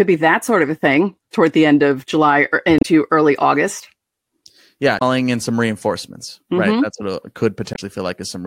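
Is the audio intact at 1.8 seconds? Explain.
Yes, at 1.8 seconds the audio is intact, with no dropout, click, distortion or other fault at that moment.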